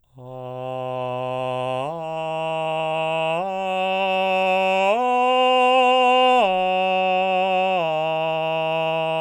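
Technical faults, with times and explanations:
No technical faults can be heard in this music.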